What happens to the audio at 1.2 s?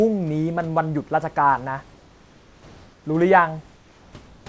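Nothing goes wrong at 1.2 s; the speech there is intact, carried through the G.722 call path with its usual coding and a faint room noise well below it.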